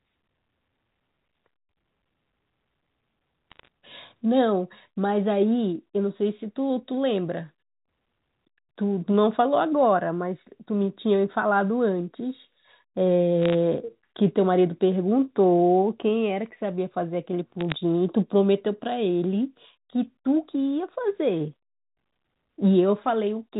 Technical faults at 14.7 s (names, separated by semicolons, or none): none